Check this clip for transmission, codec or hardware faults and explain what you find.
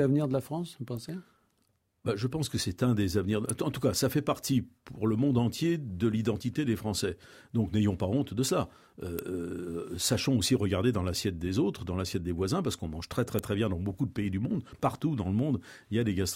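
Three sharp snaps sit on top of the speech: at 3.49 s after "c'est un des avenirs", at 9.19 s, and, loudest, at 13.39 s between "qu'on mange très très" and "très bien dans beaucoup". These are electrical switching spikes, likely arcs from a nearby switch, motor or static discharge picked up by the audio line.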